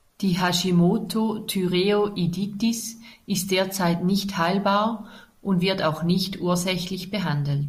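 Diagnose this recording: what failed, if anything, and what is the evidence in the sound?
Nothing in the signal chain appears to have failed: the speech signal stays continuous and stable throughout, with no audible sign of trouble at any stage.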